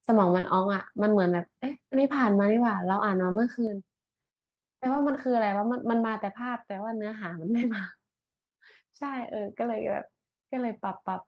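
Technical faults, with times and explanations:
0.39–0.45 s and 3.31–3.37 s, short concealed packet loss: each time about 40 ms of audio simply didn't arrive in time. The decoder bridged the hole by stretching out the last bit of sound it had, carrying the pitch forward if it was voiced or filling with shaped noise if it wasn't, and then blended back into the real signal. You hear it as a quick smear or wobble.
0.43–0.49 s, 3.35–3.37 s, 4.93–5.19 s, 6.05–6.07 s and 9.75–9.85 s, lost packet rebuilt from error correction: here packets went missing too, but the next packet carried a cut-down backup copy, which is Opus in-band forward error correction. So there's no gap, just stretches that sound rougher and grainier for 40, 20, 140, 20 and 60 ms. The longest one, around 5 s, fits about seven packets being rebuilt. The call itself tops out around 12 kHz.
3.67 s to the end, one channel drops out: from this point the whole sound steps down by about 6 dB, abruptly, and stays there. 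That's what you'd expect if one side of a stereo feed went dead before being folded to mono. Anything the two channels shared loses half its contribution, and anything that lived only in the missing side is gone. That lost channel is the likely cause, since the sound itself only shows the sudden, sustained level drop.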